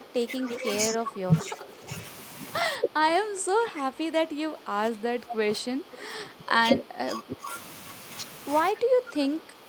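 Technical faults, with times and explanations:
0.00–0.67 s, 0.91–1.88 s, 2.78–7.51 s and 8.71–9.68 s, speech suppressed in double talk: the speech sinks, thins and breaks into pieces, dipping by around 10 dB in the first and last stretches and around 15 dB in the middle two. The likely cause is an echo canceller that could not tell this talker from loudspeaker echo while the far side spoke. Unlike an echo leak, nothing extra is added; the wanted speech itself is taken away.
0.44–0.74 s and 5.30–5.34 s, echo leak: a faint copy of speech trails the original by 215 ms, sitting about 10 dB below it, with the second instance only a brief scrap. This is likely loudspeaker sound that an echo canceller failed to remove and sent back down the line. It differs from double-talk suppression because an added delayed copy is heard rather than the speech itself being turned down.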